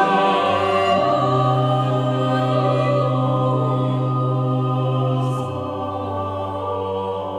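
Nothing goes wrong anywhere in this bit of music; there's simply no technical fault to point to at any moment.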